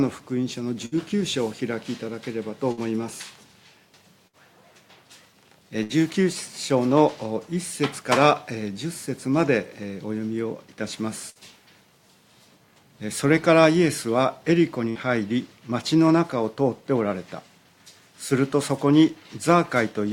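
Bursts of packet loss at 0.85, 2.72, 4.27, 5.83, 11.30 and 14.89 s. Each time roughly 60 ms of sound drops out, gets papered over with a fading held buzz or hiss, then jumps ahead.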